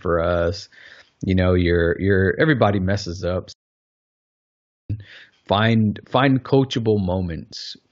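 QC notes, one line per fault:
3.52–4.90 s, playback stall: right after "you're everybody messes up" the speech cuts to dead silence for 1.37 s, then carries on. Likely the player ran out of buffered data or its thread got blocked, so output just halted until it recovered.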